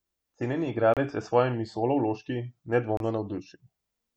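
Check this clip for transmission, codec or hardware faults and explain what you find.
Two short gaps break up the speech, at 0.94 to 0.97 s and 2.97 to 3.00 s. Each is a Bluetooth dropout lasting about 29 ms, likely from packets missing their delivery deadline to the headphones. That fits two lost packets each time. The sound cuts to silence, then resumes further along, as if it had kept playing.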